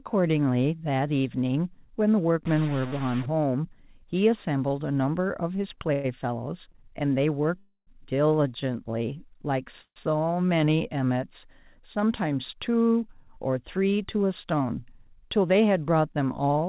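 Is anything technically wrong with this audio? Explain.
Yes, this speech has several faults.

From 2.45 to 3.26 s there's distortion, most likely a stuck bit: one data bit pinned at a fixed value, throwing samples off by its weight.

There are three call audio freezes: 5.93 to 6.07 s, 7.58 to 7.90 s, and 9.81 to 9.99 s. The receiver stretches the last sound into a fading buzz or hiss, and the two longer ones drop to silence for about 60 ms and 70 ms. The likely cause is late packets leaving the jitter buffer empty. Nothing is lost; the speech just resumes later, delayed by about 107, 287 and 148 ms.

A short stall from a late packet sits at 6.72 to 6.77 s. A sound is held about 24 ms too long while the receiver waits, then carries on.

A jitter buffer speed-up runs from 14.16 to 15.52 s. The speech plays at about 107% speed, same pitch, because pitch-period slices totalling roughly a tenth of a second get trimmed to cut the delay, so it sounds hurried.

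The audio also stops at 4 kHz, which fits a G.711 mu-law call path.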